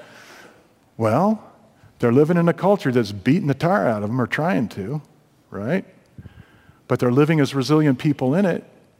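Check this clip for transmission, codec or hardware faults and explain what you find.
The speech carries one hardware fault, present from start to finish.

Sample clock jitter runs throughout: the converter's timing wanders by roughly 3 microseconds, so each sample lands slightly off time. Error tracks the waveform's steepness, sitting about 40 dB under the signal, heard as hiss and grit swelling on loud, bright sounds and disappearing in pauses.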